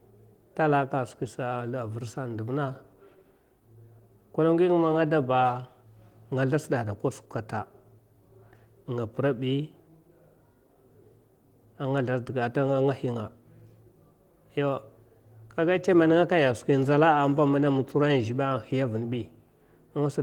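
Nothing here counts as a technical fault; the speech simply comes through Opus voice coding at 20 kbps with the light touch of compression you'd expect from that setting.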